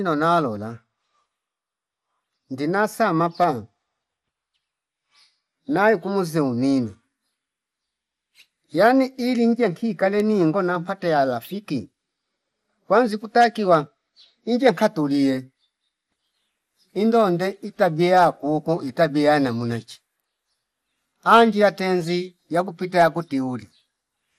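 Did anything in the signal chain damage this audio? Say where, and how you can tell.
Yes, at the codec stage: the speech sounds dull and gurgly from start to finish, with granular grit and nothing above about 15.9 kHz. That points to MP2 compression at a starved bitrate, likely around 80 kbps, where top sub-bands are switched off and what's left is coarsely quantised.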